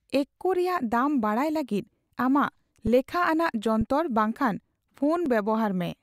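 At 2.87 s, just after "ᱫᱟᱢ ᱵᱟᱲᱟᱭ ᱞᱟᱹᱜᱤᱫ ᱟᱢᱟᱜ", and again at 3.81 s and 5.26 s, the speech freezes for about 4 to 5 ms in an underrun with a held sample: the converter holds its last value, so the waveform goes flat, and the start is nearly click-free. Each resumes after a few milliseconds of live audio were skipped.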